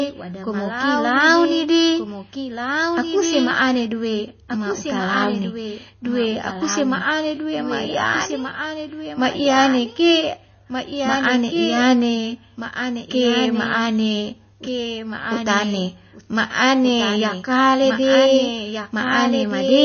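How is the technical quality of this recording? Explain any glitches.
The technical quality is poor. Two faults run through the whole speech clip.

Throughout, there is a doubled audio track. A second, dry copy trails about a second and a half behind, roughly 5 dB quieter. A slower second capture path is the likely cause.

Throughout, MP3 compression damage is plainly audible. Nothing is present above 6.5 kHz. The sound is watery and swirly, which fits a likely starved bitrate near 24 kbps.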